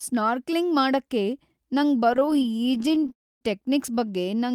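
This speech clip has packets arriving late or too slowly from 2.11 to 3.13 s, so the jitter buffer keeps running dry and the receiver stretches the last sound over each shortfall. The result is repeated stalls (stutter): many tiny fills, none longer than 18 ms, about a third of that stretch, making the speech drag and judder while nothing is lost. A call audio freeze follows from 3.13 to 3.43 s, likely from packets held up in transit emptying the buffer. The last sound is carried on briefly and then drops to near-silence for about 270 ms. The speech then resumes where it stopped, now roughly 0.28 s later.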